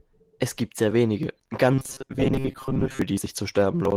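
Speech, coded with Opus at light, fullband quality, turns into robotic sound from repeated short buffers from 1.72 s to 3.02 s, right after "gibt sehr wenige". A rigid, metallic buzz near 134 Hz rides over the voice, with about half the audio replaced, likely because the playback side kept repeating a segment of roughly 7.5 ms while fresh audio arrived too slowly.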